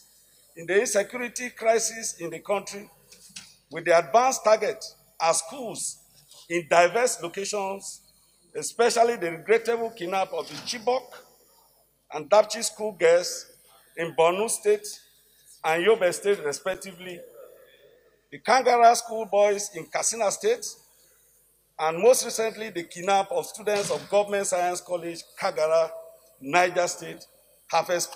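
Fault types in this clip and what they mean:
Underrun with held sample: at 16.74 s the playback buffer ran empty, and instead of dropping to zero the converter kept putting out its last sample value for 8.7 ms until new data arrived. The waveform freezes flat at that level, so the sound stops almost without a click. Around 10 ms of audio was skipped during the stall.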